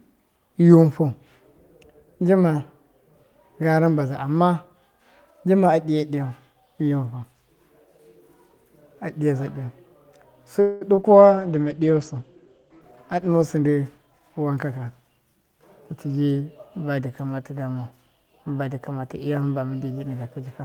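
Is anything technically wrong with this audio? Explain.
Yes, there are several call-transport faults clustered between about 10.6 and 14.7 seconds.

From 10.61 to 10.83 s a buzzy continuation fades across a roughly 0.2 s gap. This is a call audio freeze, likely from delayed packets draining the jitter buffer.

At 10.95–10.99 s and 11.01–11.05 s there are brief smears or wobbles. This is short concealed packet loss: about 20 ms went missing each time, and the gap was filled by extrapolating the preceding sound.

From 11.18 to 14.26 s the speech turns muffled and rough. This is a call bitrate drop from 32 to 14 kbps, with bandwidth falling from 20 kHz to 8 kHz and staying at its lowest for about 1.6 s.

From 13.55 to 14.65 s delivery sounds hurried at an unchanged pitch. This is a jitter buffer speed-up to 112%, trimming roughly 150 ms of pitch periods to reduce accumulated delay.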